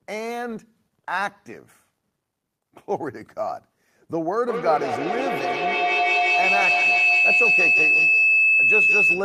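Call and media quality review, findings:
Feedback howl, 4.48 s to end of clip. Narrow tone near 3 kHz, climbing to about 6 dB above speech, loop repeat roughly every 150 ms. Mic-to-speaker loop between two co-located call devices gains level each pass. Unlike echo, repeats grow rather than decay.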